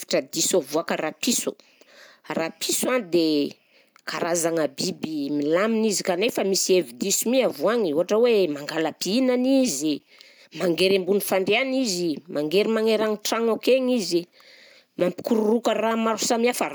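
At 15.0 s there is a gap between chunks: about 7 ms of silence inserted where one 5-second block of the speech joins the next, so nothing is lost but the flow breaks. It sounds like a brief hard-edged hole.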